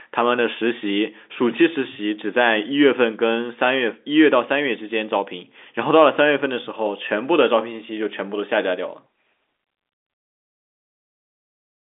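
No technical faults can be heard in this speech.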